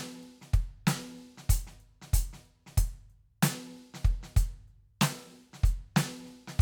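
No technical faults can be heard in this music clip. Nothing in the playback points to a problem anywhere along the recording or delivery chain.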